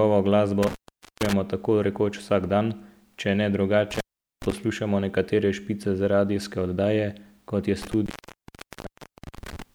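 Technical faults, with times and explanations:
0.63–1.33 s, intermittent contact: the line opens for about 0.47 s, with crackle at both edges, just before "tako rekoč vsak dan", as a loose plug breaks the signal path.
3.91–4.52 s, intermittent contact: after "vsak dan če ne" the signal drops for about 0.41 s between crackling edges, returning at "poslušamo nekatere špice za".
7.82–9.62 s, intermittent contact: following "radijske oddaje kot je" the connection opens for about 1.32 s, leaving faint hiss until contact is restored.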